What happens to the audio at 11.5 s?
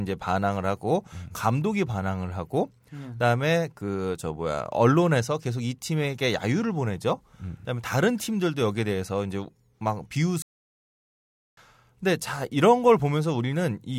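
At 11.5 s the clip is inside a playback stall running from 10.42 to 11.57 s, about 1.15 s in all. The player was likely starved of data or had its output thread blocked, so nothing reached the output until it caught up. The speech cuts off abruptly mid-flow into dead silence, holds there for just over a second, then resumes at 11.57 s.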